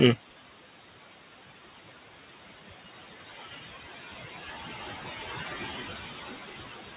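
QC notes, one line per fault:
Throughout: noise suppressor artifacts. The steady room noise, sitting about 8 dB under the speech, is pulled down by about 16 dB in the gaps and then climbs back up beneath each phrase, so the background pumps in step with the talking. Bandwidth stops at 4 kHz, which fits a G.711 mu-law call path at 64 kbps.
3.31–3.64 s: speech cut by the noise suppressor. For about a third of a second the suppressor misreads quiet speech energy as noise and turns it down along with the background, dipping as far as about 19 dB at its deepest. The affected sounds come across swallowed and faint, as if the talker briefly trailed off. This is the same frame-wise gain reduction responsible for the constant background pumping, here applied to low-level speech components.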